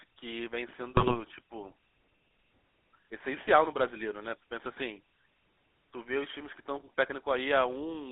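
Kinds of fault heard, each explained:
GSM full-rate codec: The speech has been squeezed through the original GSM full-rate codec, which fits a 13 kbps stream. It models the vocal tract and excites it with sparse regular pulses, so the speech comes out buzzy and gravelly, band-limited to about 250 Hz to 3.7 kHz.
GSM bit errors: Corrupted bits on the radio link reached the decoder and garbled the filter, pitch and gain values it was rebuilding from. Between 0.96 and 1.19 s the sound breaks into gargling squawks and pops with erratic jumps in level and tone.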